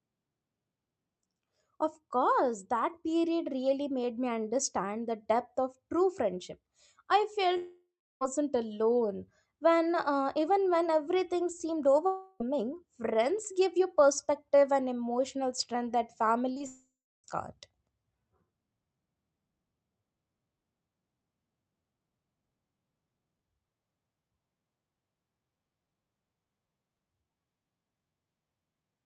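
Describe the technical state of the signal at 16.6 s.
Right around there, just after "and emotional strength that", you get short concealed packet loss, twice back to back: 16.53 to 16.58 s and 16.58 to 16.62 s. Each gap is only a few tens of milliseconds, and the receiver patches it by extending the last bit of sound and blending back into the real signal. So it comes across as a quick smear or wobble rather than a clean break.

Almost immediately after, from 16.66 to 17.26 s, there's a long network dropout. It's likely from the network stalling, with nothing arriving for about 0.58 s. The decoder keeps the last sound going as a fading buzz or hiss, and in the back stretch, roughly the last 0.3 s, there's just silence. Then the audio picks up again with that chunk gone. All of it sits on the Opus call path, which holds the audio band to about 8 kHz.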